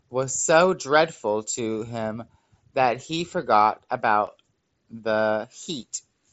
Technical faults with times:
3.15 concealed Bluetooth headset packet loss
4.26 concealed Bluetooth headset packet loss

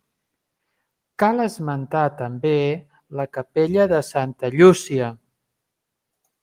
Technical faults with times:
none

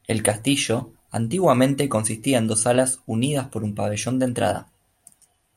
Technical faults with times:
none

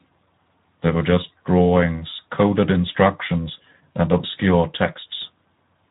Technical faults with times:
0.00-5.90 Speex codec

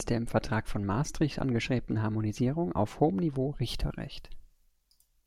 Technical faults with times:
3.64-5.27 pre-emphasis left on

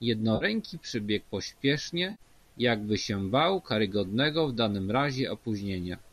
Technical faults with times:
0.35-0.45 AAC frame loss with concealment
2.11-2.22 AAC frame loss with concealment

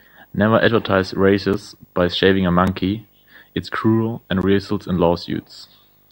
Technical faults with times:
0.00-6.12 video or display buzz
1.53 block of digital silence
2.67 block of digital silence
4.41 block of digital silence

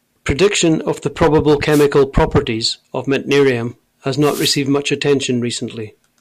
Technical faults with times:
1.70-1.86 wireless microphone noise hit
4.20-4.59 wireless microphone noise hit

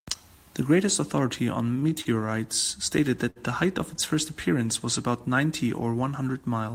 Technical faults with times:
1.79-2.07 short stall from a late packet
3.30-3.38 short stall from a late packet

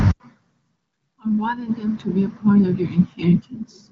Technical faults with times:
none

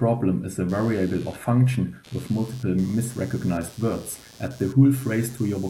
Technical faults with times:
0.69-5.70 computer activity noise

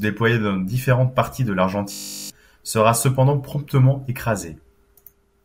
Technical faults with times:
1.92-2.30 system hang loop

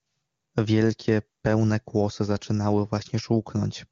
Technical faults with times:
none

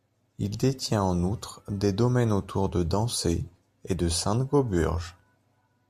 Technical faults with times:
none

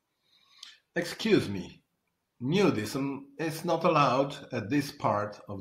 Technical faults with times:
none

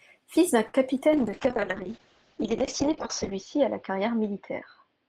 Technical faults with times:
0.67-0.76 short stall from a late packet
1.00-1.03 short concealed packet loss
1.13-5.08 call bitrate drop

